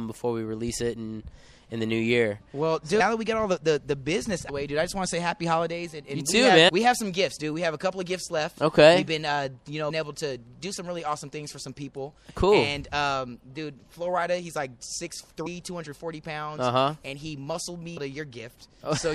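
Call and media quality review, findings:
MP3 compression, whole clip: plainly audible codec damage, a watery, swirly texture where weak frequency lines drop in and out between frames, with smeared attacks. Likely an MP3 encode that ran short of bits; the damage level fits something around 64 kbps. The encoder zeroes the lines its hearing model rates as least important, and those holes shift frame to frame.

Compressed frames skipped, six spots: 2.99, 4.48, 6.68, 9.89, 15.45 and 17.96 s. Each is a brief smeared blip where the audio jumps ahead. The jumps are about 200 ms at the first three, about 150 ms at 9.89, about 100 ms at 15.45, and the biggest, about 300 ms, at 17.96. Whole frames are missing or were rejected by the decoder. The 26.1 ms frame spacing fits MP3 at 44.1 kHz, so the jumps work out to roughly 4 to 10 frames each. Overlapping lossy frames smear the join instead of clicking.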